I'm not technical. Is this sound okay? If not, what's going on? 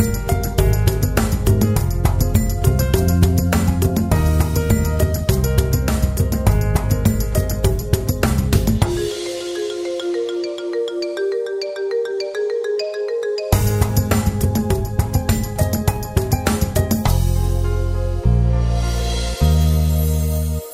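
Yes, nothing stood out as wrong when listening to this recording.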